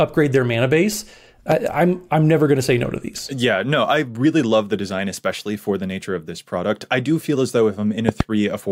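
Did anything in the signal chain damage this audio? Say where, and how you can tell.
Yes. Loud pops hit at 1.52 to 1.54 s, about 15 dB above the speech, and as a double pop at 8.09 to 8.23 s, about 20 dB up. The waveform shows tall spikes over continuing speech, and the spectrogram shows full-height vertical stripes. The likely cause is a voltage step in the analogue wiring.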